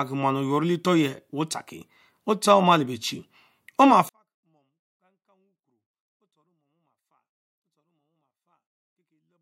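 At 4.09 s, just after "omale beechie oma", a 24-bit alignment error sets in: 24-bit samples sitting in the low bytes of 32-bit words are being read as full 32-bit integers, so every value lands 8 bits lower than intended. The speech keeps its clean shape but falls abruptly by about 48 dB, dropping to a near-inaudible whisper that stays there through to the end of the clip.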